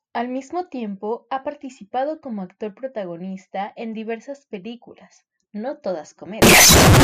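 From 6.42 to 7.03 s, speech becomes a harsh, near-square blare with noise as loud as voice; likely float read as integer, with 32-bit float bits taken as integers.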